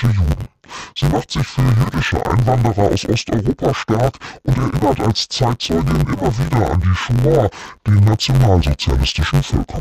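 From start to finish, the speech sounds dull and robotic, with a buzz at about 94 Hz and no clear octave drop. That's interleaved audio read as planar: each block of about 10.7 ms, which fits a 512-sample buffer, gets split into halves played together at half speed.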